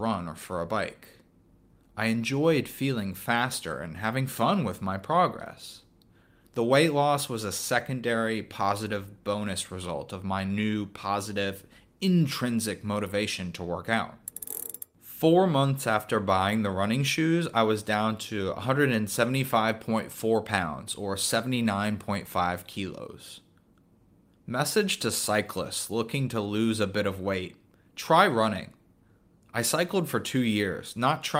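No technical faults are audible.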